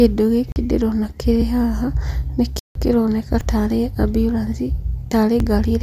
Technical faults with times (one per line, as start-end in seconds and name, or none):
0.52-0.56 block of digital silence
1.42 audio missing between chunks
2.59-2.75 block of digital silence
3.41 audio missing between chunks
5.40 audio missing between chunks